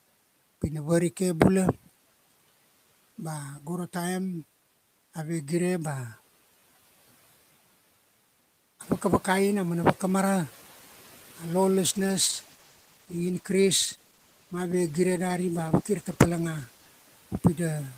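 From 8.81 to 9.62 s the noise suppressor is catching up: after room noise jumps about 10 dB near 9 s, the background passes through, then sinks about 6 dB over 0.81 s. This is a gradual fade, not a gate's abrupt cut.

From 11.87 s to the end, a call bitrate drop from 40 to 14 kbps, held lowest for about 4.8 s, leaves speech muffled and watery. The degradation is continuous, without the gaps that packet loss would leave.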